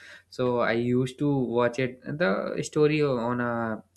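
Speech recording with no audible technical faults.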